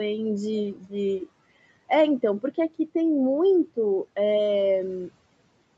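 From 0.75 to 0.93 s the noise suppressor treated speech as noise and cut it by about 11 dB, leaving it briefly swallowed and faint.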